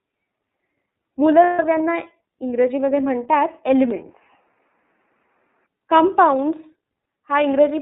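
The whole clip runs through the iLBC codec. The band is squeezed to about 200 Hz to 3.7 kHz, and the texture that fits its 13.33 kbps, 30 ms frame mode gives the speech a plainly rough, slightly synthetic edge.

At 1.44 to 1.60 s there are lost iLBC frames. About 150 ms goes missing, which fits five 30 ms frames. The decoder fills the hole by repeating the last pitch cycle with noise, so you hear a held, buzzy vowel before the voice snaps back cleanly.

From 3.91 to 5.66 s the sound goes duller and boxier, with nothing above 3 kHz, a faint new noise floor roughly 50 dB down, and no gap or real level jump at either edge. That's likely the input switched to a poorer device, which narrowed the band and brought its own background noise.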